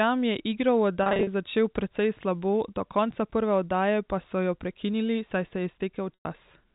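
Packet loss with pitch repetition hits twice: at 1.03–1.27 s, short dropouts of 40 ms at most leave brief buzzy held tones, and at 6.14–6.25 s the repeated period fades toward silence, over a telephone-band G.711 line.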